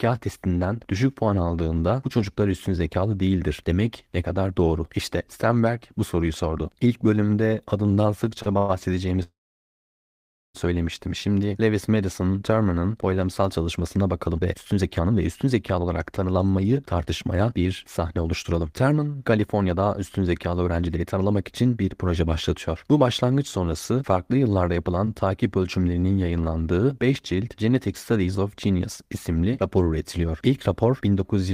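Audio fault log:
8.42 to 8.48 s, short stall from a late packet: just after "bölümde adından" a sound is held about 35 ms too long with a slight buzz, seen as a smeared, repeated harmonic band.
8.58 to 8.71 s and 9.23 to 10.56 s, call audio freeze: the speech halts and resumes where it stopped, likely from held-up packets. The first fills 110 ms with a fading buzz. The second buzzes briefly then goes silent for about 1.2 s, a flat gap in the waveform.
14.27 to 25.92 s, jitter buffer speed-up: after "boylamsal çalışmasına" speech runs about 12% faster at unchanged pitch, roughly 1.5 s trimmed, so it sounds hurried and the spectrogram shows compressed syllable spacing.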